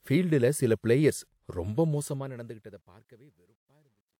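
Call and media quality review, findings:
Undithered fade or volume stage, likely keeping only about 11 bits: truncation distortion on a fade from 1.68 s, after "ஃபீல்டுல சில பிளேயர்ஸ்". Level collapses into coarse square steps and turns gritty, worst 2.95–4.2 s.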